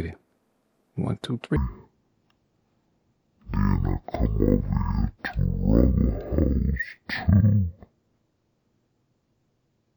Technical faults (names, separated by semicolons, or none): stereo read as mono